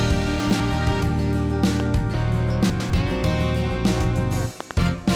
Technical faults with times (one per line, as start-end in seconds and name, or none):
0.40-0.60 chunks out of order
1.80-1.82 loud pop
2.09-2.14 damaged data in a compressed stream
2.70-2.90 chunks out of order
4.60-4.73 loud pop